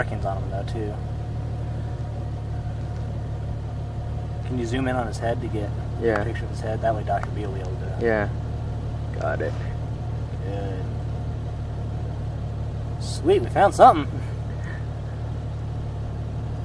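No technical faults can be heard anywhere in the clip.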